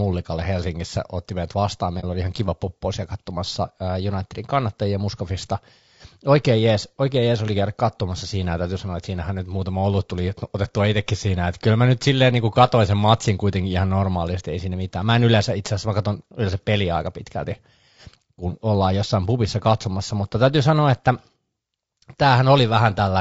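Speech that sounds rough and grainy throughout, with a noisy haze between the pitch harmonics and a thin, somewhat synthetic top band. This is likely low-delay AAC compression (AAC-ELD), whose short frames resolve harmonics poorly; the damage fits a low rate of about 32 kbps. Two brief soft-edged dropouts occur, from 2.00 to 2.04 s, between "otti meidät vastaan" and "oli ihan kiva poppo", and from 4.46 to 4.50 s. This is AAC frame loss with muting: a lost frame was zeroed, and the overlapping windows faded the sound out and back in.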